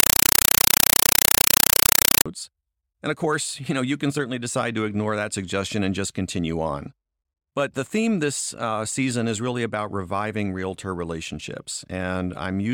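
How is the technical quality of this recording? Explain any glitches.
The recording opens with a serious glitch. From 0.00 to 2.26 s, a compressed stream is played as audio. An undecoded AC-3 bitstream is output as raw samples. It gives very loud, chattering static: 5.33 ms noise bursts, 31.25 times per second.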